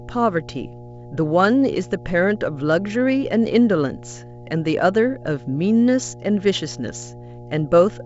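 A ground loop or nearby transformer is coupling the 60 Hz power line into the signal from start to finish, producing mains hum: a steady low tone with some low harmonics, roughly 20 dB below the speech, sitting beneath wideband telephone audio that stops near 7.7 kHz.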